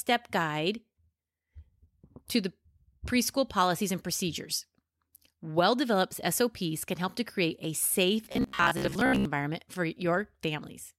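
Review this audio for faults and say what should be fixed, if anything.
Right after "to create a safe", from about 8.25 to 9.25 s, the speech collapses into robotic sound from repeated short buffers: a rigid, metallic buzz near 66.7 Hz that still loosely tracks the words. That pitch fits a 15 ms chunk being looped. The likely cause is audio arriving late, so the playback side kept repeating the last slice while about half the real audio got skipped. To prevent it, give the stream a deeper jitter buffer and fix whatever is starving it upstream.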